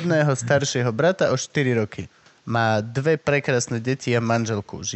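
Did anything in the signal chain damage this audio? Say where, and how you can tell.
No, nothing in the signal chain damaged this speech.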